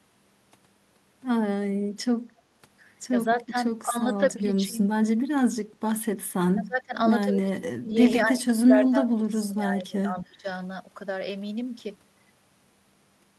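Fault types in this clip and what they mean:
Speech suppressed in double talk: the echo canceller likely mistook overlapping talk for echo and turned the near talker down with it, so the speech dips six times between 3.27 and 10.46 s, from about 10 dB early to about 25 dB later.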